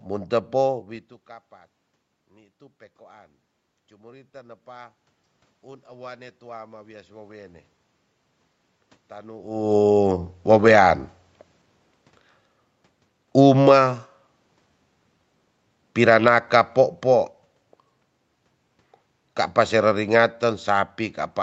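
From 13.32 s to 17.44 s the speech sinks steadily, and the room noise behind it drops by the same amount, so the whole level slides down by about 3 dB rather than the talker simply turning away. That shared fall marks automatic gain falling: the gain control judged the input too hot or its background noise too strong and eased its gain back over roughly four seconds, pulling voice and background down together.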